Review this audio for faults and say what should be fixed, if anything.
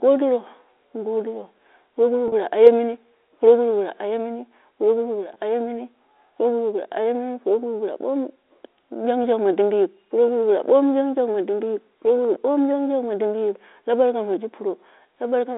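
Two brief buzzy holds interrupt the speech, at 2.28 to 2.32 s and at 5.34 to 5.36 s. Each time the sound sticks on a single tone for a moment before carrying on. This is packet loss with pitch repetition: the receiver covered 40 ms and then 20 ms of missing audio by looping the last pitch period. Those gaps fit two lost 20 ms packets and then one. The G.711 telephone coding around them carries the 300 Hz to 3.7 kHz line band cleanly. A more reliable network path, backed by forward error correction or redundant packets, would prevent these losses.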